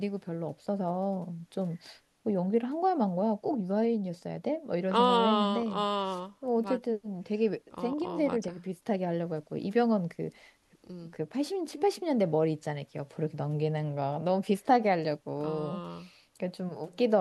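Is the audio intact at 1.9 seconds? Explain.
Yes, at 1.9 seconds the speech plays through intact, with no dropout, click, distortion or other fault audible at that moment.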